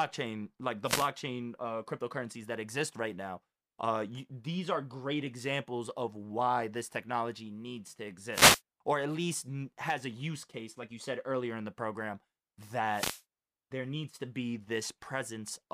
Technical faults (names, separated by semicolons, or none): wireless microphone noise hit